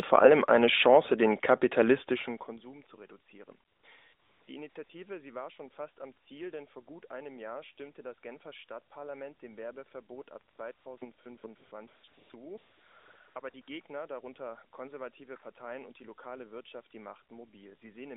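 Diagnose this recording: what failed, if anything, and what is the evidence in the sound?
AMR comfort noise, codec stage, in seventeen brief gaps between 3.68 and 13.68 s, clustered around 3.7 to 4.9 s and 10.5 to 13.7 s, lasting 20 to 780 ms. Discontinuous transmission stopped speech frames, and synthetic noise replaced the real background.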